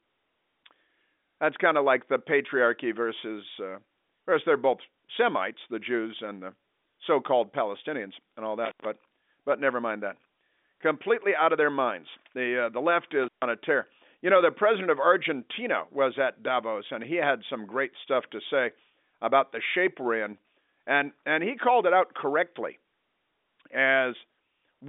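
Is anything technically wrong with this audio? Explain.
Yes. An intermittent contact breaks the signal twice, from 8.65 to 8.85 s and from 13.23 to 13.45 s. A loose plug or cable momentarily opens the circuit, so the speech cuts out for 86 ms and then 139 ms, with crackle at each edge and faint hiss during the gaps. The G.711 telephone coding is not part of the fault. It is what limits the band to about 250 Hz to 3.6 kHz, with nothing above 3.7 kHz.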